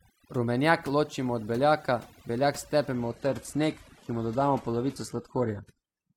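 A noise reduction stage set far too strong runs through this entire speech recording, a case of overdone noise removal: it pushes individual frequency bands down whenever they sit near its noise estimate, leaving near-silent gaps with twinkling specks. From 2.93 s to the end, the adaptive stream drops to a lower bitrate. Quality changes abruptly with no gap, and treble vanishes above 12.3 kHz, consistent with a switch from AAC-LC at around 96 kbit/s to a low-rate HE-AAC version near 16 kbit/s.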